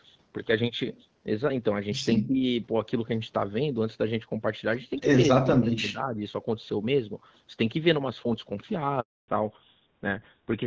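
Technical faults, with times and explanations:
2.2–2.44 s, speech suppressed in double talk: level dips by about 20 dB, likely the echo canceller ducking the talker along with the loudspeaker echo; waveform shows a sudden notch.
9.0–9.28 s, handover gap: 280 ms of silence as the call switches networks and no frames arrive; flat waveform, blank spectrogram column.
9.28 s to end, fallback to narrowband: the codec drops to GSM full rate, so nothing remains above 4 kHz; the spectrogram's upper band abruptly empties, sounding duller.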